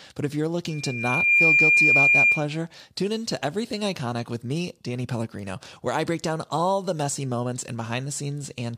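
A speech clip with loudspeaker feedback squeal from 0.69 to 2.47 s, between "but if you're" and "tune in to": a 2.4 kHz tone swells over about 0.7 s to roughly 10 dB above the voice. Unlike a steady interference tone, it grows by itself as the mic-to-speaker loop regenerates.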